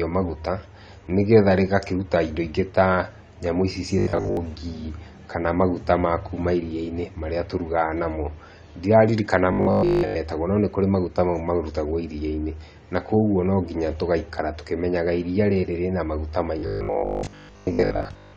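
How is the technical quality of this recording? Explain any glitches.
The speech is degraded throughout by lossy coding, with three stretches of robotic buzzing.

AAC compression runs throughout: sibilants sound dull and smeared, likely from AAC-LC at a low bitrate around 32 kbps.

Robotic sound from repeated short buffers occurs at 3.99–4.37 s, at 9.53–10.17 s just before "no nĩkũrĩ maguta mau", and from 16.59 s to the end. Most of the real audio is skipped while a 20 ms fragment repeats, likely a buffer underrun, imposing a rigid 50 Hz metallic buzz.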